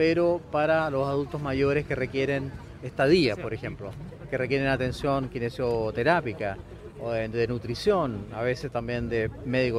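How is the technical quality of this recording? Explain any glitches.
No glitches or technical faults are audible anywhere in the recording.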